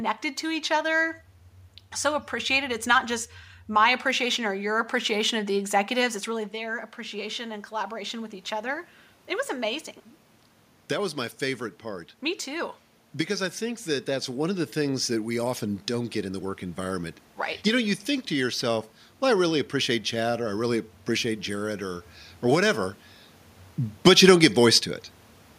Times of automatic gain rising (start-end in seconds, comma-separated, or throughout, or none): 6.33-17.19